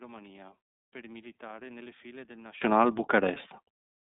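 Speech, heard through the iLBC codec for the whole clip. The band is confined to roughly 150 Hz to 3.7 kHz, so nothing above about 4 kHz survives, and the plainly audible coding damage gives the speech a rough, slightly synthetic edge. Each 30 ms frame's excitation is coded independently of the previous frame, which fits the 13.33 kbps mode and accounts for the rough, synthetic texture. From 0.0 to 2.62 s the speech drops by about 24 dB and turns faint before returning to full level. The likely cause is one channel inverted: with one stereo channel's polarity reversed, the shared centre content cancels when the channels are summed to mono, leaving only the small difference between them.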